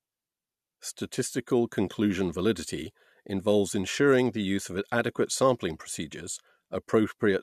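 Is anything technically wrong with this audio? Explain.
No, nothing technically wrong stood out on listening to this speech recording.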